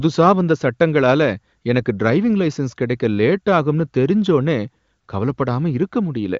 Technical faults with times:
none

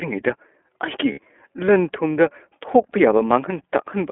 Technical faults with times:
0.00-4.11 iLBC codec
1.12-1.19 lost iLBC frames
3.18-3.21 lost iLBC frames

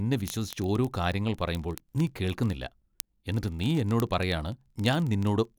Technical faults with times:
0.12-5.58 word clock ticks

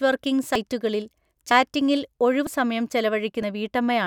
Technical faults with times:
0.55 audio missing between chunks
1.51 audio missing between chunks
2.47 audio missing between chunks
3.42 audio missing between chunks

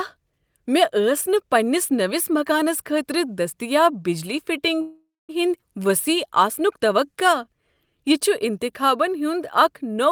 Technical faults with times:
4.81-5.31 call audio freeze
5.61-5.64 skip ahead
5.82-7.99 jitter buffer slow-down

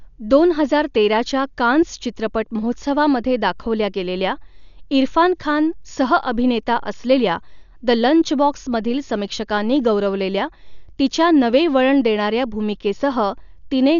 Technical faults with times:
0.00-14.00 Dolby Digital compression

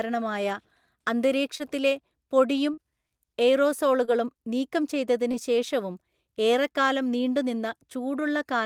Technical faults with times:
1.57-1.62 short concealed packet loss
2.74-2.79 short concealed packet loss
4.05-4.09 short concealed packet loss
5.31-5.35 short concealed packet loss

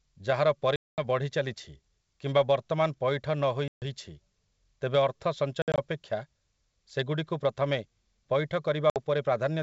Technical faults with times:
0.76-1.02 packet loss on an ADPCM call
3.68-3.83 packet loss on an ADPCM call
5.62-5.79 packet loss on an ADPCM call
8.90-8.99 packet loss on an ADPCM call

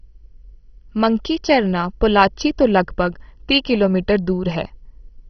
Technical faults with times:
0.00-5.29 MP2 compression

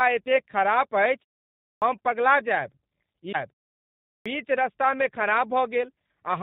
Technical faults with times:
0.00-6.42 G.729 codec
1.58-1.82 clipped start after a pause
4.02-4.26 clipped start after a pause

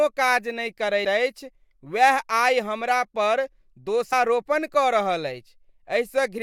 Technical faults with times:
1.04 compressed frames skipped
4.12 compressed frames skipped

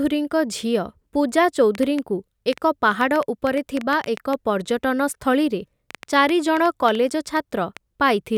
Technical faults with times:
1.75-7.78 train of clicks

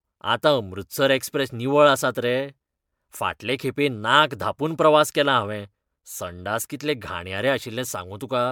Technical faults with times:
0.00-8.51 generation loss

